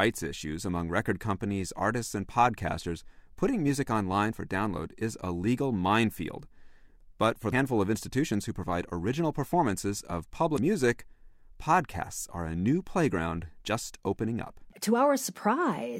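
A speech recording with two brief glitches, at 7.49 to 7.53 s and 10.54 to 10.59 s, caused by damaged data in a compressed stream: corrupted bytes make the decoder misread frames and lose sync.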